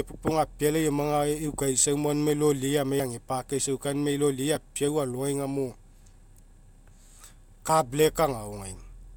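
Speech clip with a single jump at 7.69 s, where about 10 ms of audio is skipped and the two sides join abruptly, likely a dropped buffer (overrun).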